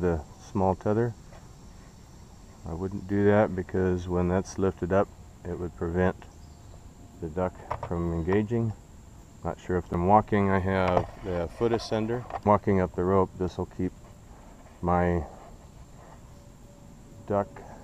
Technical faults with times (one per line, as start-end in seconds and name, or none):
12.45 stream segment skipped